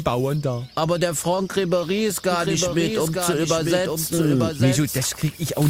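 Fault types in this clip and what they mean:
doubled audio track: one full-band copy trails about a second behind, about 5 dB quieter, cutting in and out abruptly with no echo-like decay, likely from a slower duplicate capture path.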